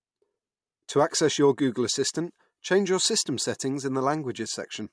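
No technical faults can be heard anywhere in the recording.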